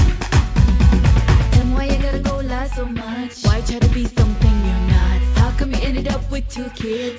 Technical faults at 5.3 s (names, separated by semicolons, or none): none